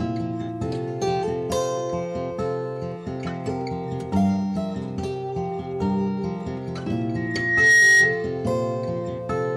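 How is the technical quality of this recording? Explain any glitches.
There's one real problem in this music recording: a burst of loudspeaker feedback squeal near the end. From 7.16 s to 8.3 s a single tone at 1.9 kHz swells up over roughly half a second and ends up about 10 dB louder than the music. What's happening is the mic is hearing the speaker it feeds, and at 1.9 kHz the loop gain climbs past one. That frequency keeps reinforcing itself into a piercing whistle until the loop gets broken.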